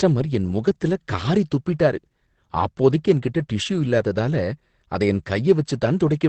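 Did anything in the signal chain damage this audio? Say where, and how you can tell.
Yes, at the codec stage: the speech sounds muffled and hoarse throughout, with nothing above 8.6 kHz, likely Opus compression in its speech mode at around 12 kbps.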